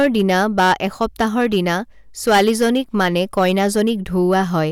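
Hard clipping runs through the whole speech clip. The signal is driven about 10 dB past what a stage in the chain can pass, so peaks are sliced flat on a small fraction of samples, adding high harmonics heard as harsh, crackling fuzz on louder syllables.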